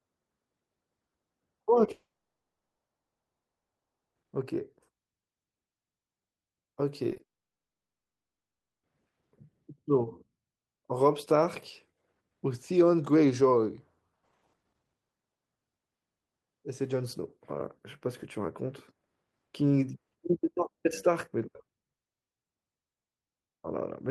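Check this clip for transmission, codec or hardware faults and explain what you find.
Two transmission faults are present: two long dropouts and a short run of concealed packet loss just before the second dropout.

The long network dropouts run from 1.91 to 4.17 s and from 7.23 to 8.85 s. The sound stops and resumes later with the missing speech gone, most likely because nothing arrived over the network. The first gap holds about 2.1 s of silence and the second is silent throughout. Both appear as blank, flat stretches on the waveform and spectrogram.

Short concealed packet loss occurs in three back-to-back 40 ms spans at 7.09, 7.13 and 7.17 s. The decoder patched each hole by extending the preceding sound, which produces a brief smeared wobble. On a spectrogram this looks like short smeared patches just before the second gap.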